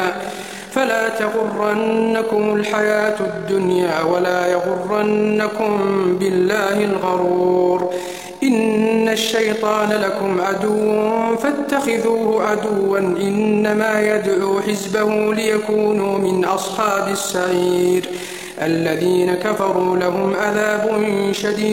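From start to finish the audio carries overlap-add ripple: it was split into windowed frames and rejoined with an overlap whose window gains don't sum evenly, so the level dips and swells about 6 dB once per frame, at around 40 times a second. The ear hears a fast, rough flutter, a robotic tremolo over everything. On a waveform the envelope shows regular scalloping; a spectrogram shows evenly spaced vertical banding across all frequencies.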